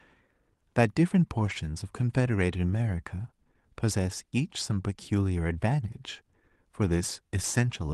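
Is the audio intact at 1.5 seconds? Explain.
No. From 1.45 to 1.55 s, a lost packet rebuilt from error correction occurs, with three packets lost and rebuilt. A low-bitrate backup copy fills the gap, so it sounds rougher and noisier.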